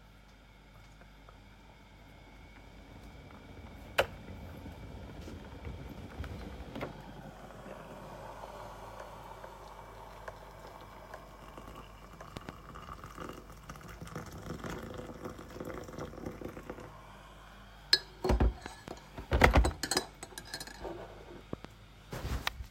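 At 12.37–12.51 s, 18.66–18.90 s and 21.53–21.67 s, a loud pop, a double thump, rises about 15–20 dB over the sound, likely a voltage spike, showing as twin waveform spikes and vertical broadband spectrogram lines.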